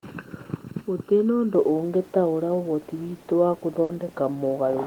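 From 0.00 to 1.55 s, one channel lags the other by about 0.7 ms before mono summing, causing channel delay (comb filtering): a hollow, phasey sound with notches from around 700 Hz, clearing before "ũngĩtaũra ũhoti witũ wa". At 3.83 to 3.91 s, just after "ũngĩtaũra ũhoti witũ wa", a burst of packet loss drops audio. The receiver stretches the last sound for 60 ms, then 60 ms of speech are missing.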